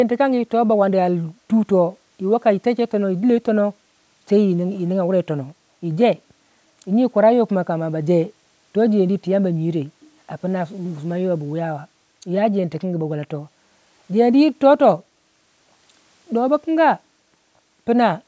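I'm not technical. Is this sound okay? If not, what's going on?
Yes, nothing in this speech recording points to a problem. It has the slightly thin sound of audio picked up by a phone or computer call microphone, which trims away the deepest bass and nothing above about 8 kHz, and that is normal.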